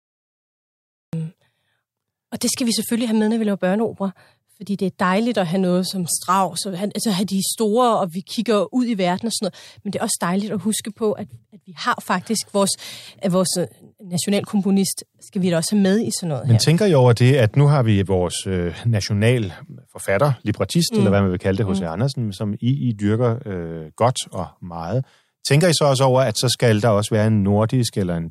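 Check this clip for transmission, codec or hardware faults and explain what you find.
One fault is present, a cut-off start. From 0 to 1.13 s there is dead digital silence, then the speech bursts in mid-sound with no attack or fade. Capture or streaming evidently began late, so the opening of that sound was never recorded.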